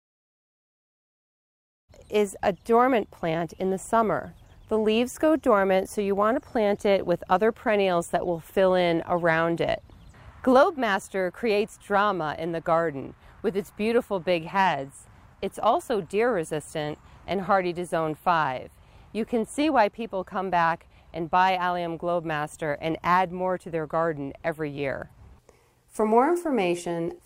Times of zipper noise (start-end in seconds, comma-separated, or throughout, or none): none